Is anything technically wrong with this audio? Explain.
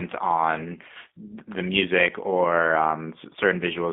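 Yes. Throughout, the speech passes through a G.729 codec, which rebuilds each 10 ms frame from a vocal tract filter, a pitch predictor and a few pulses. The band runs only from 200 Hz to 3.6 kHz, consistent with an 8 kbit/s coder, and the voice sounds plainly rough and synthetic.

From 0.87 to 0.91 s, just before "the music or", there is VoIP packet loss concealed by the speech codec. A single 20 ms packet was likely lost, and the decoder extrapolated from its last pitch and filter. The speech smears into a brief buzzy tone or coloured noise that fades before recovering.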